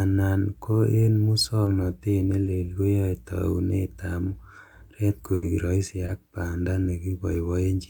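Short concealed packet loss at 1.64 s and 2.44 s: each time about 20 ms of the speech arrived too late to decode, and the receiver bridged the hole by extending the preceding sound and blending back. Each is heard as a brief smear or wobble.

A burst of packet loss runs from 5.34 to 5.44 s. About 80 ms of consecutive audio was lost, so the receiver prolonged the last sound while fading it into a held buzz or hiss. Speech then resumes with that stretch missing.

Another short concealed packet loss at 6.06 s replaces roughly 20 ms the same way, leaving a similar quick wobble.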